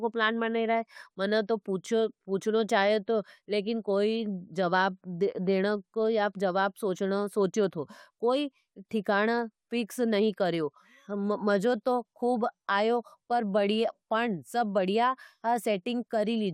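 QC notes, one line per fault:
No faults found in this speech recording.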